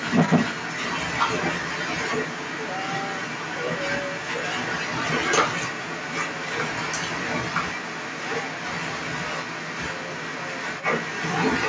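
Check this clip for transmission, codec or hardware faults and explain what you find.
There's one fault, and it runs the whole way through. From 0 to about 11.7 s the other side's voice is leaking through, sitting well above the main talker. The likely cause is an echo canceller that didn't scrub the loudspeaker's sound from the mic, so it comes through over band-limited call audio that tops out at 8 kHz.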